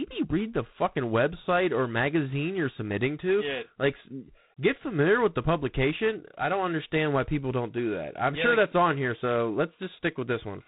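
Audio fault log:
Throughout: G.726 ADPCM. The speech runs through the whole clip with a harsh, rasping hiss that grows with loud syllables and falls away in pauses. Each sample is coded as a coarse step from a predicted value, and here too few bits per step leave plainly audible quantisation noise, which fits a 24 kbit/s rate. Nothing passes above 3.9 kHz. A steady noise floor would not follow the speech level, and a plain low-pass filter would leave no grit.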